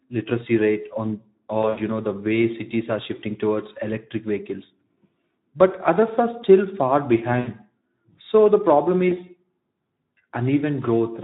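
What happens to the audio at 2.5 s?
At 2.5 s the speech is passing through the Speex codec, which is active for the whole clip rather than starting there. The encoder works at a low setting, and the damage points to a rate of roughly 11 kbps. That leaves the CELP model too few bits for the excitation signal, so the speech comes out plainly hoarse and noisy, as the fine detail of the voicing has been replaced by a coarse approximation.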